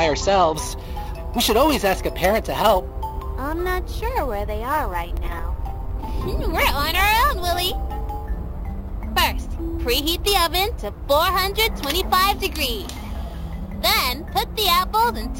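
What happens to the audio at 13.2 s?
At 13.2 s the audio is within a stretch of imaging from sample-and-hold upsampling running from 0.55 s to the end. It was raised from 16 kHz to 44.1 kHz by repeating samples unfiltered, so a mirrored copy fills 8 to 16 kHz at about -15 dB, heard as a metallic fizz tracking the level.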